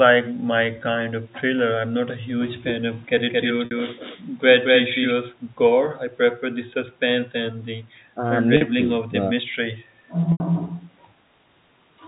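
A doubled audio track runs from 3.17 to 5.11 s: an equally loud, dry copy trails about a fifth of a second behind, likely from a second, slower capture path.

Packet loss with pitch repetition occurs at 3.65 s (60 ms), 8.57 s (40 ms) and 10.32 s (80 ms). Each gap is bridged by a repeated pitch period that sounds like a brief buzzy hold, with the longest fading out before the sound resumes. The telephone-band sound, with nothing above 4 kHz, fits G.711 coding working normally.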